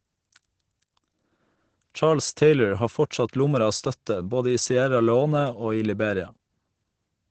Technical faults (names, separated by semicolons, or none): Opus voice compression